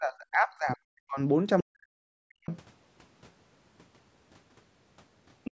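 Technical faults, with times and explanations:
0.0–1.2 s and 1.62–2.47 s, speech suppressed in double talk: the speech sinks deeply, by roughly 40 dB at its lowest. The likely cause is an echo canceller that heard both sides at once, could not tell the talker from loudspeaker echo, and turned everything down.
2.48–2.56 s and 5.44–5.51 s, other side's voice leaking through: short, faint scraps of a second voice appear, about 25 dB and then about 15 dB below the main speech. They are likely loudspeaker sound that the echo canceller did not fully remove from the microphone.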